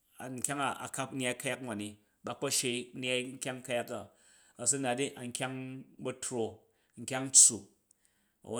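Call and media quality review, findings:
Crude rate conversion, 5.57–7.07 s: resampler using plain linear interpolation, no anti-alias filter; pattern fits a 48 kHz to 44.1 kHz conversion. Gritty, inharmonic fizz tracking louder and brighter speech, error roughly 30 dB below signal.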